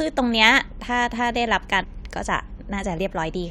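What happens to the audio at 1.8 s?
A short squawk cuts through the speech from 1.82 to 1.85 s: damaged data in the compressed stream, so the decoder misreads the frames there and loses sync.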